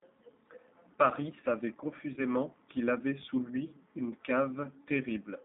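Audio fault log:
throughout G.729 codec: band limited to roughly 200 Hz to 3.7 kHz, with plainly rough, synthetic speech from sparse-pulse excitation, consistent with an 8 kbit/s G.729A stream.
2.14 to 2.21 s VoIP packet loss concealed by the speech codec: about 30 ms missing, fitting three 10 ms frames. The decoder extends the last pitch and filter with fading gain, giving a brief buzzy or noisy smear, and the speech stays weak or distorted briefly after recovery.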